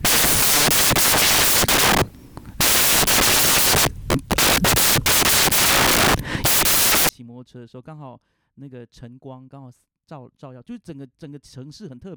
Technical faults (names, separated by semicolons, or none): samples built from the wrong bytes